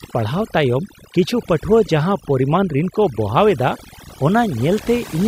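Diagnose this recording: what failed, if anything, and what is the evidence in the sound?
The failure is in call processing: overdone noise removal, a suppressor set far too aggressively on a noisy recording, and it runs for the whole clip. Any frequency band sitting close to its noise estimate gets pulled far down or switched off, and the softer parts of the speech fall below that line too. The result is a background that drops and breaks up into twinkling specks of leftover noise.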